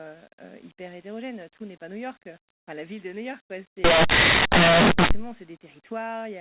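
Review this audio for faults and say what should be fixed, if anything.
Linear audio read as companded, from 3.84 to 5.11 s: the speech turns into very loud, harsh distortion because plain linear 8-bit samples are being expanded as mu-law codes. Values just to one side of zero become the loudest outputs, while their mirror values stay tiny. To prevent this, label each segment's coding explicitly and have the decoder check that label before applying any mu-law expansion.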